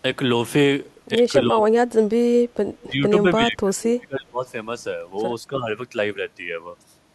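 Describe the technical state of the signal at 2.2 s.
Speech suppressed in double talk, 1.91 to 2.23 s: the echo canceller likely mistook simultaneous talk for echo, so the speech dips sharply, around 35 dB.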